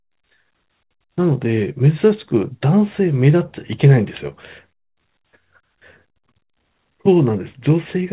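No technical faults can be heard in this speech.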